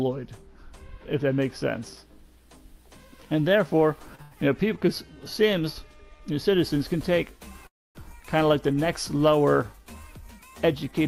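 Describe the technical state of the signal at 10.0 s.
Around 10.0 s the signal is intact, with no dropout, distortion, glitch or other technical fault at that point.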